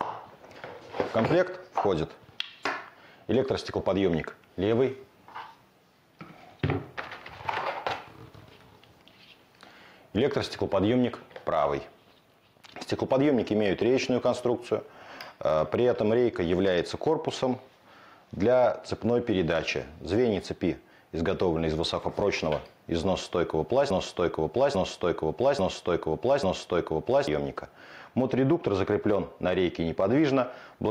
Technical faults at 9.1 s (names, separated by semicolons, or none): gain pumping